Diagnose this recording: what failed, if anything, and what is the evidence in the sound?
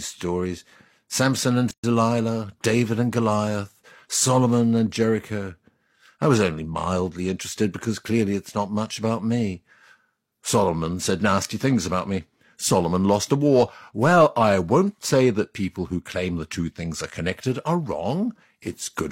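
Codec stage: a gap at a join of encoded pieces. From 1.71 to 1.84 s the speech breaks into a 126 ms gap with smeared edges, then resumes where it stopped. Encoder delay and padding stayed in at the join. A network dropout would lose sound.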